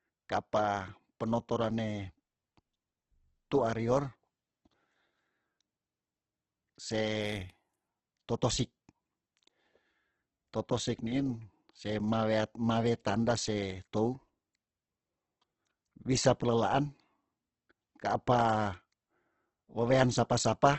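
Throughout, the speech sounds grainy and rough, with a noisy texture on every syllable and nothing above 8.2 kHz. That's likely Opus compression in its music mode at a rate pointing to around 12 kbps, filling starved bands with noise.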